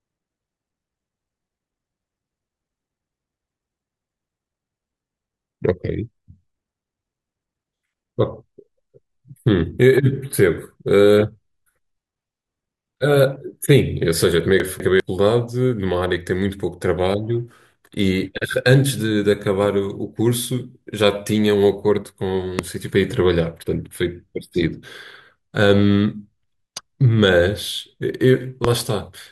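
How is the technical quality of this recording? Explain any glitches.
The recording has two kinds of glitch: one jumbled moment and two sharp pops.

From 14.6 to 15.0 s, chunks are out of order. A 200 ms chunk arrives one chunk late and plays after its successor, so nothing is missing, but the speech jumbles rather than leaving a gap.

Loud pops occur at 22.59 to 22.61 s and 28.65 to 28.67 s, each a single pulse about 15 dB above the speech. The likely cause is an electrical transient, such as static or a switch. The speech carries on underneath, which distinguishes these from dropouts.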